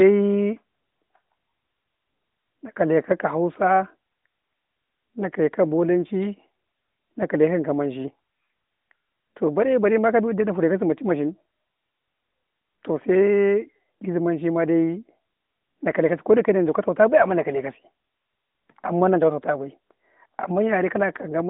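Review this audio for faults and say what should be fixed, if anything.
Nothing here needs fixing: it's speech carried over the AMR narrowband mobile codec at 12.2 kbps, so it has that familiar phone-line sound with nothing above about 3.8 kHz, and that's just how the channel is meant to sound.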